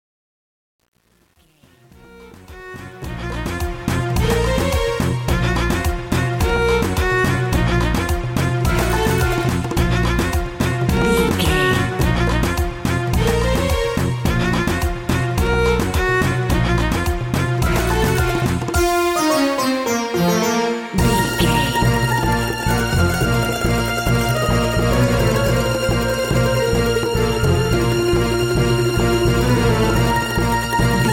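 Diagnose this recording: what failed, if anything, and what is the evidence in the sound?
The fade-in at the start shows truncation distortion from a gain stage during sample-format conversion. The level rises over the first 3.86 s, but the quiet portion from 0 to 2.9 s is gritty. A digital fade rounded each sample to a coarse step without dither. At low level the waveform collapses into a few square steps. The roughness points to about 9 bits of resolution.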